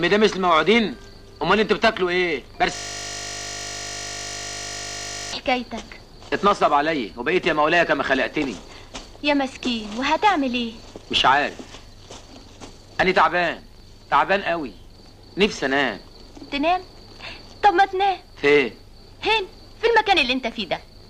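From 2.75 s to 5.33 s the audio locks up into a system hang loop: a single 20 ms slice of sound repeats exactly, well over a hundred times, so you hear a steady buzz at 50 Hz instead of the material moving on. That's the machine or its audio driver freezing while the sound hardware keeps cycling the same ring buffer, and a 20 ms loop fits a buffer of that length being replayed until things recover.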